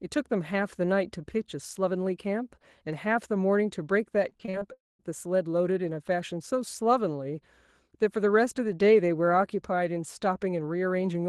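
From 4.29 to 4.63 s there's repeated packet loss, the robotic kind: five short holes, the longest 37 ms, patched by stretching the previous sound, so about a third of that span is filler. It comes across choppy.

Right after, from 4.73 to 5.01 s, the audio drops out entirely, likely a long network dropout. The last sound smears on as a fading buzz or hiss, then you get roughly 190 ms of near-silence before the audio picks back up with that chunk simply gone.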